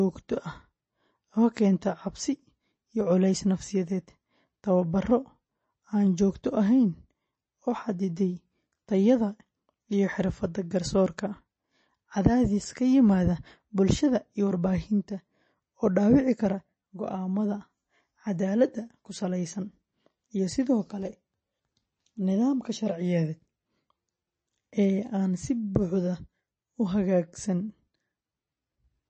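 From start to finish the speech sounds dull and watery, with nothing above about 8.3 kHz and a swirly, chirping texture on s sounds that is plainly audible. This is likely MP3 compression at a low bitrate, consistent with around 32 kbps. Short of bits, the encoder has cut the treble at a fixed frequency and dropped weak frequency components, which flicker on and off between frames to produce that metallic, underwater quality and smeared attacks.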